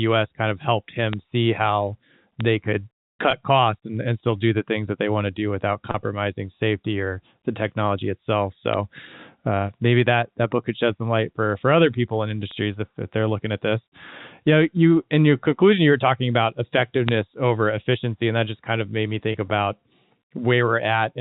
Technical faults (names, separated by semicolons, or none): bit error spike; packet loss with pitch repetition